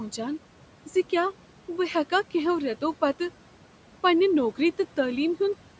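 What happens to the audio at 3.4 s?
Noise suppressor artifacts are present at 3.4 s, as they are across the whole clip. The suppressor judges which frequency bands hold steady room noise and pulls them down by about 12 dB frame by frame, so the residual noise ducks between syllables and swells back under them. On a spectrogram, the noise floor, already capped at 8 kHz by the call processing, shows blotchy, flickering gaps. The waveform shows a pumping background level.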